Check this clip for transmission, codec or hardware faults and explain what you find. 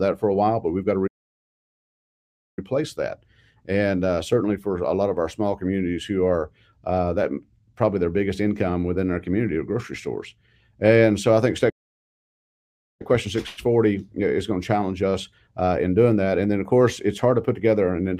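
Two playback stalls interrupt the clip, at 1.07 to 2.59 s and at 11.69 to 13.02 s. The sound cuts out mid-flow into silence for about 1.5 s and then 1.3 s before resuming, likely because the player ran short of data or its thread was blocked.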